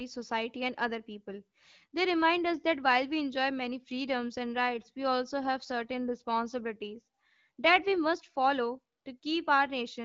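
Nothing here counts as a technical fault; the speech comes through the AMR wideband (HD Voice) codec at 12.65 kbit/s, a rate where that codec keeps speech clear, with only the light coding traces expected at that setting.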